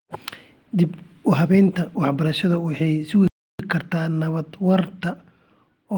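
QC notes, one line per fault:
3.28–3.59 s, playback stall: the player likely ran short of buffered data or had its output thread held up, so the speech breaks off into dead silence for about 0.32 s after "waxay sugi" and resumes with "kartaa nabad waarta".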